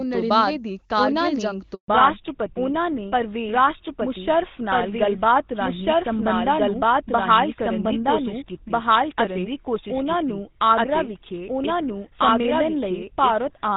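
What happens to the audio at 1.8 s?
A handover gap hits right after "ਤੋਂ ਬਾਅਦ ਉਨ੍ਹਾਂ ਨੇ". The call switches networks and no speech frames arrive, so the voice drops to silence from 1.74 to 1.88 s, a 140 ms hole.

A fallback to narrowband follows at 1.88 s. The call leaves HD Voice for the older GSM full-rate codec, so everything above 4 kHz disappears and the voice stays duller and rougher through the end.

A doubled audio track is also present here, likely from a second, slower capture path. An unreverberant full-band copy of the same speech runs about one and a half seconds behind at roughly equal loudness.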